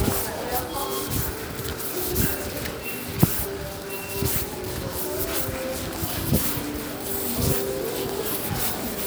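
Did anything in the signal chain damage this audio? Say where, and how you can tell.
No, nothing in this recording of sounds points to damage at any stage of the chain.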